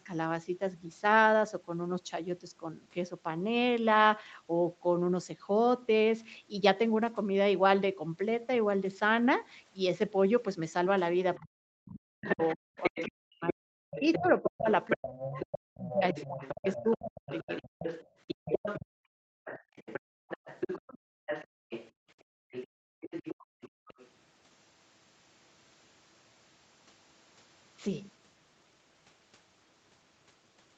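At 11.36 s, for about a tenth of a second, a faint second voice sits roughly 25 dB under the talker. This is the other side's voice leaking through, likely loudspeaker echo the canceller missed.

From 11.37 to 17.51 s the talker dips in pieces, by as much as about 40 dB, for roughly four seconds in total. This is speech suppressed in double talk. Both sides likely spoke at once, and the canceller turned both down.

From 12.21 to 18.86 s the leaked voice returns much louder, only about 10 dB below the talker.

Between 18.35 and 20.28 s the room sound drops out, by up to 40 dB, for about a second in all. This is background gated by the echo canceller. It clamped the microphone while the loudspeaker played.

From 19.45 to 21.91 s the other voice leaks again, about 10 dB down.

From 20.98 to 23.88 s the background is gated again, up to 40 dB deep, for about one and a half seconds in total.

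From 22.51 to 24.08 s the leaking voice comes back, about 15 dB below the talker. All of this sits within the call path's band, which stops at 8 kHz.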